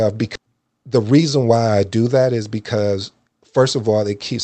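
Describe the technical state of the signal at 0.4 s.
At 0.35 to 0.37 s there is a skip ahead. The jitter buffer, already holding later audio, discarded a stretch of roughly 0.7 s, either lost on the way or dropped on overflow. Playback leaps forward with no gap or fill, and the sound on either side of the missing piece is butted straight together.

From 0.46 to 1.58 s a jitter buffer speed-up follows. The buffer was holding more than its target delay, so the receiver trimmed short pitch-period slices again and again, removing around a tenth of a second in total. The speech runs at about 109% speed with unchanged pitch and sounds hurried.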